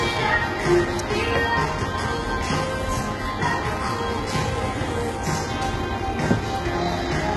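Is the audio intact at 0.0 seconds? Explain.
No. At 0.0 s the sound already has the heavy damage that runs throughout, likely HE-AAC compression at a very low bitrate: the treble is rebuilt from copied lower bands, so it sounds gritty and metallic, with nothing above 11.8 kHz.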